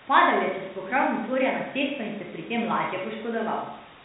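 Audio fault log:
No faults found; the speech carries the narrow band and faint level-following hiss expected of G.711 telephone coding, and nothing else is heard.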